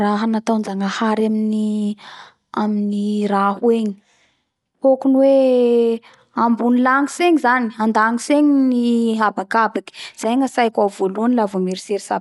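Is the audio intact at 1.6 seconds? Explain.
No. At 1.6 seconds, as throughout, the speech sounds dull and rough, with fluttering noise around tones and nothing above 11.4 kHz. The likely cause is Dolby Digital compression at a rate fitting 64 kbps, which cuts the band and fills bit-starved lines with noise.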